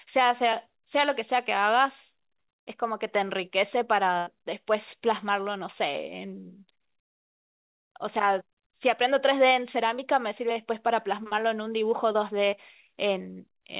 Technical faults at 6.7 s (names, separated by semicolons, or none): short concealed packet loss